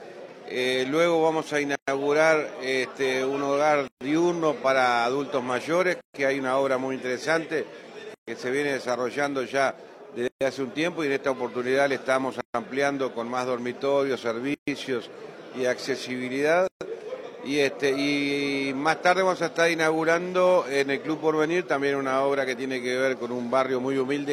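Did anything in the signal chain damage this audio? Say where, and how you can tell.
Yes, at the codec stage: there is a gap at a join of encoded pieces, eight times, at 1.75, 3.88, 6.01, 8.14, 10.28, 12.41, 14.54 and 16.68 s. Continuous sound breaks off in a gap of 123 ms the first time and 133 ms after that, with smeared edges, then resumes where it stopped. The pieces were each about 2 s long, encoded separately and joined untrimmed, so each encoder's start-up delay and last-frame padding remain in the file.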